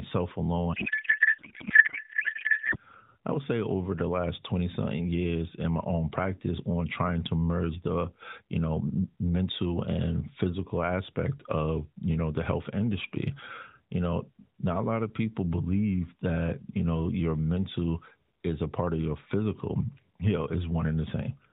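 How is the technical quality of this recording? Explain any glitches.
The recording has one clear glitch near the start, heard through a narrowband mobile codec whose light buzziness and cut-off above 4 kHz point to AMR-NB at around its 12.2 kbps mode.

From 0.74 to 2.77 s, just before "I would say over", there is a codec payload misread. Frames packed in AMR's octet-aligned format are decoded as if bandwidth-efficient, so every field lands in the wrong bits. The speech turns into garbled, warbling noise that barely tracks it. On a spectrogram the harmonic speech striations give way to smeared, disordered energy below 4 kHz.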